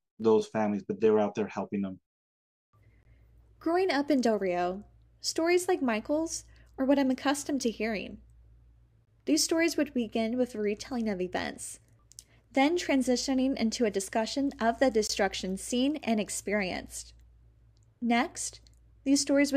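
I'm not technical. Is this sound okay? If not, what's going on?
No. The speech has a gap between chunks three times: at 3.03, 9.05 and 15.07 seconds, the last one right after "a discussion of the" and before "seen and experienced". Each is a tiny hard-edged silence, about 21 milliseconds, spaced exactly six seconds apart. The audio was handled in six-second pieces, and a sliver of silence got inserted at each join. Unlike a dropout, nothing is lost. The speech simply pauses and carries on.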